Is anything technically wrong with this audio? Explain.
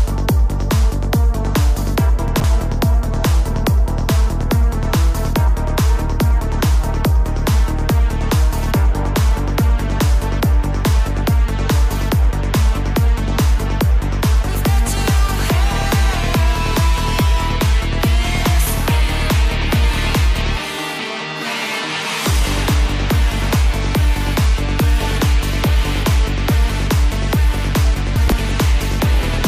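Yes. Chunks out of order at 2.28–2.44 s and 28.16–28.32 s: a 40 ms chunk plays three chunks late, so the audio briefly jumbles, with three hard joins.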